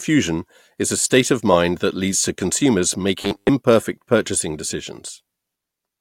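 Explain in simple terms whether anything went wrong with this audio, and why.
Something went wrong from 3.19 to 3.5 s. For about a third of a second, the speech turns into a flat, metallic buzz. You can still follow its rough shape, but it sounds like a machine. This is robotic sound from repeated short buffers. The likely cause is that fresh audio arrived too slowly, so the player kept replaying tiny 10 ms scraps. That looping sets a fixed 100 Hz hum. Most of the real sound in that stretch was skipped.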